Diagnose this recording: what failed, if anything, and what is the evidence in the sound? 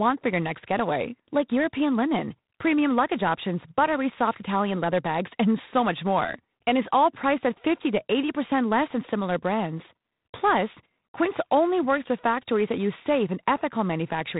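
Codec stage: G.726 ADPCM throughout. A harsh, rasping hiss tracks the speech level, and nothing passes above 3.9 kHz. The coarse difference coding fits roughly 24 kbit/s.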